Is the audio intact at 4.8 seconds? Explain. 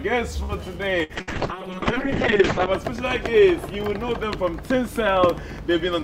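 Yes, the audio is intact at 4.8 seconds, with no dropout, glitch or other fault at that point.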